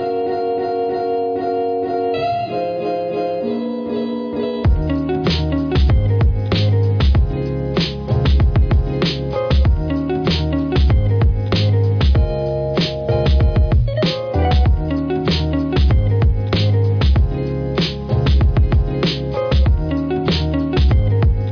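No technical faults are audible anywhere in this audio.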